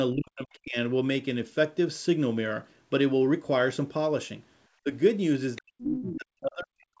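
From 0.13 to 0.77 s the speech sinks sharply, by roughly 40 dB at its deepest, and parts of it vanish. This is speech suppressed in double talk. The likely cause is both ends talking at once. The echo canceller could not tell the local talker from loudspeaker echo, so it turned everything down. At 4.83 to 4.89 s there is a brief, shallower dip of about 15 dB. From 5.57 s to the end the suppression returns, again reaching roughly 40 dB.

Inside that last stretch, from 5.79 to 6.02 s, a second voice leaks through. This is the other side's voice leaking through, sitting around 15 dB below the speech. It is likely residual echo. The far end played on the loudspeaker and reached the microphone, and the canceller failed to remove all of it. It comes through as a short, faint scrap.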